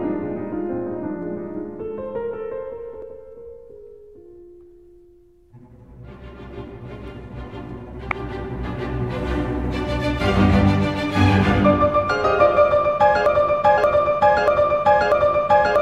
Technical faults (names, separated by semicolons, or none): damaged data in a compressed stream; broken-record loop